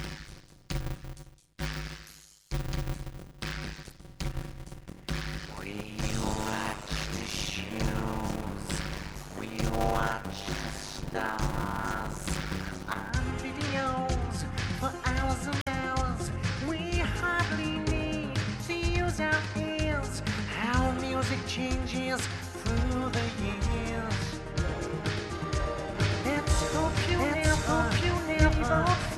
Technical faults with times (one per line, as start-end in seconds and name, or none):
0.00-13.10 block size mismatch (padded)
3.88-3.92 damaged data in a compressed stream
15.59-15.68 damaged data in a compressed stream
25.95-29.15 doubled audio track